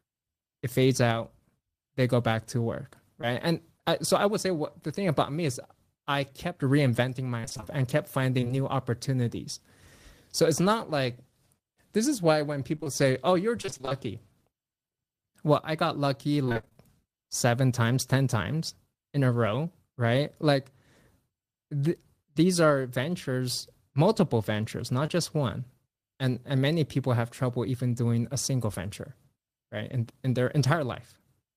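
Speech, with brief smears at 3.21–3.24 s and 25.06–25.10 s: short concealed packet loss, where 20 ms of audio never arrived and the decoder stretched the preceding sound across the hole. Choppy, robotic stretches at 7.40–8.51 s, 12.75–13.94 s and 16.45–16.77 s come from repeated packet loss, with gaps of up to 28 ms patched one after another, covering nearly half of the last, shortest stretch.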